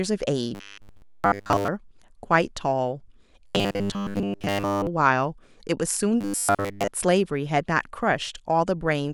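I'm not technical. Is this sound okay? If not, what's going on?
No. The voice turns into a rigid, metallic buzz at 0.55–1.68 s, 3.47–4.87 s and 6.21–6.88 s. This is robotic sound from repeated short buffers, likely a roughly 10 ms scrap replayed, giving a 100 Hz drone.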